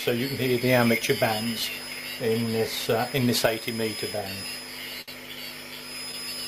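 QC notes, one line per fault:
5.01–5.10 s, short stall from a late packet: buffer ran empty, so the last sound is held 63 ms, nothing lost. Spectrogram shows frozen horizontal streaks; the waveform shows repeating cycles.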